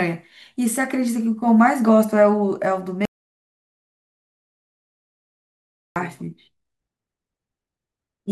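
From 3.05 to 5.96 s an audio dropout to silence cuts the speech abruptly; input was likely lost, leaving no room tone, unlike a gate.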